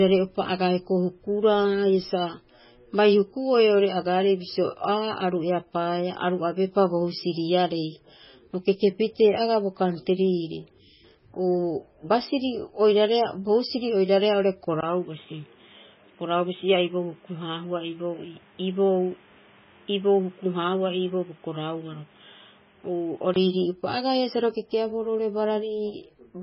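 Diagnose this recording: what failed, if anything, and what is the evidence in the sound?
Codec stage: the whole recording is cut off sharply at 5.6 kHz and has a watery, swirling texture, with sibilants smeared and chirpy. This is likely MP3 compression at a very low bitrate, around 16 kbps. The encoder drops the treble and lets weak spectral lines switch on and off between frames. On a spectrogram this shows as a hard ceiling at 5.6 kHz, with patchy, blocky holes flickering below it and consonant onsets blurred in time.

Input or driver stage: at 14.81 s, just after "oiraareha oo'ore", there is a 20 ms gap. Then the sound turns dull and boxy, the level falls by about 5 dB, and a new noise floor appears about 30 dB below the signal. Clarity returns at 23.36 s. This is most likely an input switched to a poorer device with a narrower passband. On a spectrogram the content stops at 3.8 kHz for that span, with a faint noise floor underneath. 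The waveform shows a brief flat gap at the switch and a lower envelope.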